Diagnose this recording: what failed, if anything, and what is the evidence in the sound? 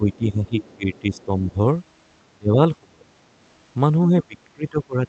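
The speech ducks in three stretches. From 0.00 to 1.56 s it dips by about 10 dB over roughly a second. From 2.31 to 3.10 s it drops sharply, by about 30 dB, for around half a second. From 4.11 s to the end it sinks by about 25 dB. This is likely speech suppressed in double talk at the call-processing stage: the echo canceller could not tell the local talker from loudspeaker echo, so it attenuated both.

From 0.13 to 1.24 s a faint second voice sits underneath the talker, about 30 dB lower. That is likely the other side's voice leaking through. The echo canceller left part of the far-end signal, played on the loudspeaker, in the microphone feed, so it reaches the recording as residual echo.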